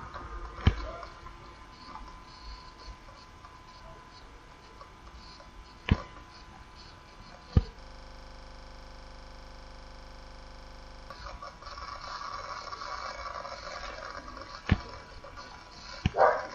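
A system hang loop runs from 7.81 s to 11.10 s: the system froze while the sound hardware kept replaying its ring buffer, so one 40 ms fragment of audio repeats exactly, roughly eighty times, producing a rattling buzz that pulses at 25 Hz.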